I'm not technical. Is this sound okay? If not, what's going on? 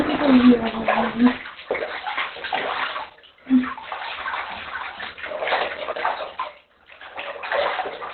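No. The whole clip sounds muffled and rough, like a phone line. Nothing above 4.2 kHz survives. Heavy Opus compression at a very low setting is the likely cause.

From 4.32 to 5.92 s there is a doubled audio track. A slightly quieter copy trails about half a second behind, then cuts off abruptly.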